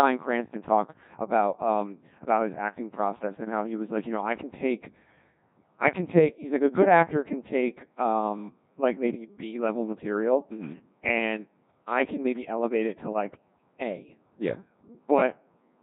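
From start to finish the speech passes through a Codec 2 vocoder, and the damage is heavy. Only pitch, voicing, loudness and a rough spectral shape survive; the decoder rebuilds the voice from sine waves, so the result is a buzzy, robotic tone, consistent with a rate near 1.6 kbit/s. Unlike a starved transform codec's swirling, watery warble, here the original waveform is entirely replaced by synthesis.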